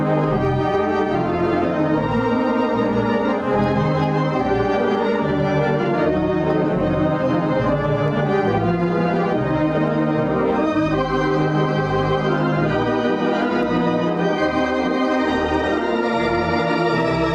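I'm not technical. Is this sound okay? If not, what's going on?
No. From start to finish the audio has gain pumping: the level is pulled down each time something loud arrives, so it seems to breathe. Loud and quiet moments end up squashed close together. The likely cause is a recording level set far too high, with a fast limiter yanking it back on each loud sound. A noise gate instead shuts the background off in the gaps, rather than letting it rise.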